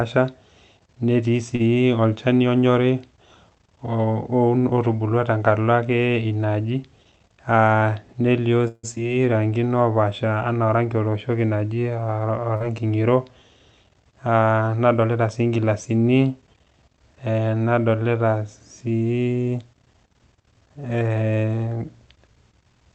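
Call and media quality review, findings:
Short stall from a late packet, 1.55–1.75 s. Packet missed its slot, jitter buffer drained, receiver stretched the last sound for 41 ms and resumed in place. Nothing lost; one sound held too long, slight buzz or dip, delay up 41 ms.

Jitter buffer speed-up, 6.96–7.18 s. Buffer over target; receiver trimmed pitch-period-sized slices repeatedly, about 50 ms removed. Playback at 117% speed, pitch unchanged, so this short stretch sounds hurried.

Call audio freeze, 8.68–8.85 s. Jitter buffer ran empty, likely packets held up in transit. Last sound carried on as a fading buzz or hiss for 157 ms, ending in 10 ms of silence, then resumes where it stopped. Gap inserted, nothing missing.

Skip ahead, 8.95–8.98 s. Audio dropped in transit or by the buffer on overflow, delay cut about 50 ms. About 70 ms of sound dropped, joined almost directly with a 10 ms fill. 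Audible jump forward right after the freeze.

Jitter buffer slow-down, 9.03–9.39 s. Buffer low; receiver repeated pitch periods to rebuild its reserve, adding 59 ms. Audio at 86% speed, same pitch, drawn-out sounds.

Short concealed packet loss, 12.56–12.62 s. About 40 ms never reached the decoder; concealment extrapolated the preceding sound for 38 ms, then crossfaded back. Brief smear or wobble; a short consonant may drop. Audio top end stops near 8 kHz on the Opus path.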